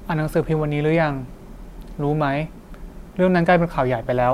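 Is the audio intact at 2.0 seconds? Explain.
Yes, at 2.0 seconds the speech runs intact, with no dropout, click, distortion or other fault at that moment.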